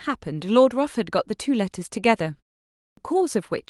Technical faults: clipped start after a pause

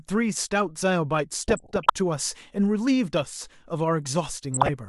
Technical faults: DAB burbling

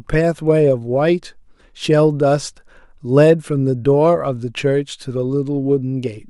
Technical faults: none

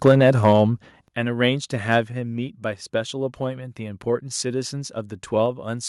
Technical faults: microphone overload; microphone volume stepped down

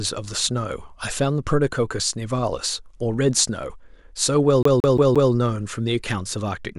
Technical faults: CD stuck on one turn

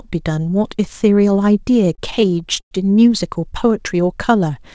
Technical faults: repeated stalls (stutter)

